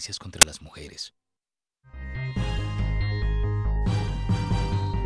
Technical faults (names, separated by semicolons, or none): file tags played as audio